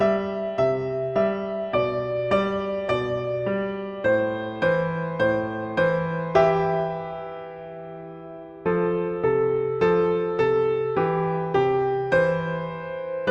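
Nothing in this audio sounds wrong; there's no glitch, dropout or distortion anywhere to point to.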